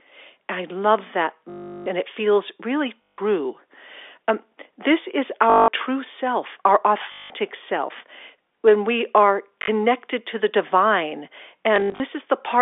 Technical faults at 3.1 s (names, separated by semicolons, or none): packet loss with last packet repeated